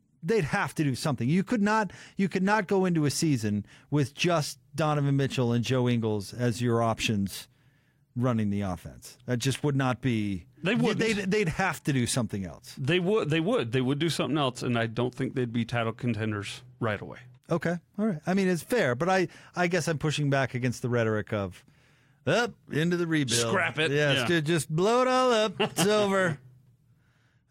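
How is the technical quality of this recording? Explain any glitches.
No glitches turn up anywhere in the recording, and the technical quality holds steady throughout the speech. There is nothing to explain.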